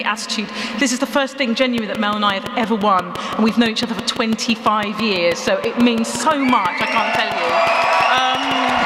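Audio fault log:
1.78–8.7 s: train of clicks. A steady ticking sits over the sound at about 5.9 clicks per second, evenly spaced, roughly forty in all, each similar in shape and well above the level of the audio, likely from interference by nearby equipment or a faulty connection or power supply injecting repeated pulses.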